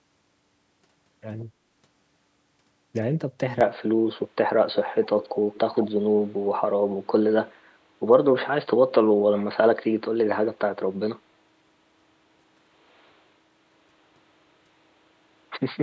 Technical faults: input switched to a poorer device; echo leak

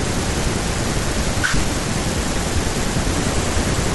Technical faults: none

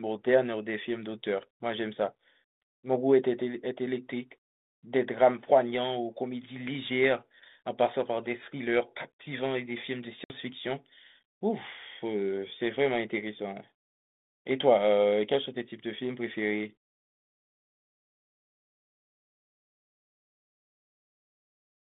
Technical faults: packet loss on an ADPCM call

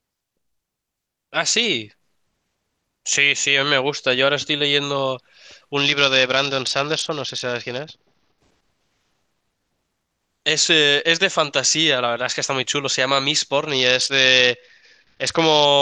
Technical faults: Bluetooth SBC bit pool drop

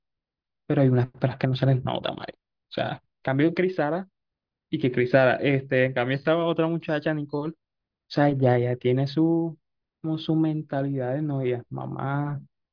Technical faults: none

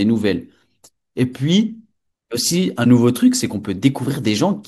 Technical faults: corrupt frame decoded

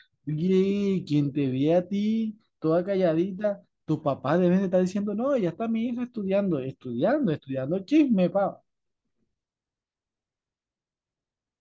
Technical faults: none

